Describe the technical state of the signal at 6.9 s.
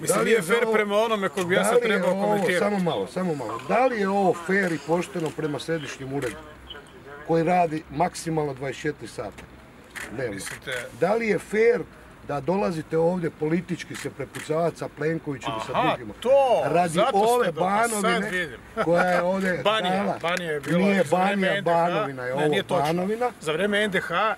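The signal at 6.9 s is intact, with no dropout, distortion, glitch or other technical fault heard at that point.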